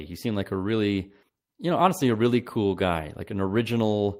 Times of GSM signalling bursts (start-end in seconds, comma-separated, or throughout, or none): none